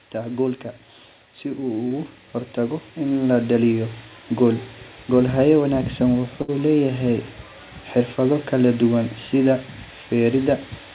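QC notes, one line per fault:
1.57–4.02 s, automatic gain rising: the level climbs steadily by about 7 dB over roughly two and a half seconds as the gain control lifts a quiet input. Background rises with the voice, which separates this from a talker simply speaking louder.
1.88–1.92 s, short concealed packet loss: about 20 ms of audio never arrived and was filled by extending the preceding sound before blending back. It is heard as a brief smear inside the gain swell. Nothing audible is skipped beyond that sliver, unlike a burst loss.
6.42–6.50 s, burst of packet loss: roughly 60 ms went missing in a row, so the receiver held the last sound and let it decay into a buzz or hiss before the audio resumed further along. The jump in continuity marks it as lost audio rather than a dropout to silence.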